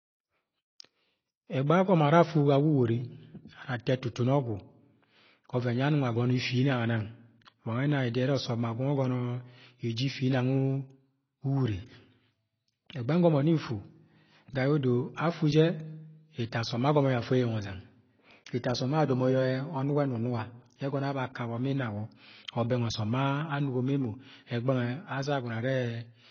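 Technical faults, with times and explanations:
Throughout, AAC compression: the speech sounds dull and smeared, with a warbling, fizzy texture on sustained sounds and sibilants, likely from AAC-LC coding at a low bitrate near 24 kbps, where the encoder lowers its cut-off and leaves gaps across the spectrum.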